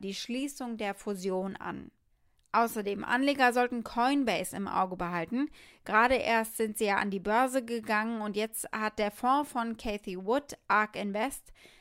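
No technical faults can be heard anywhere in the recording.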